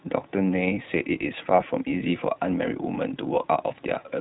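From start to finish the speech carries plainly audible iLBC codec damage. Everything above 4 kHz is gone, and each short frame, which fits 20 ms at around 15 kbps, is coded on its own, so the voice sounds slightly rough and synthetic.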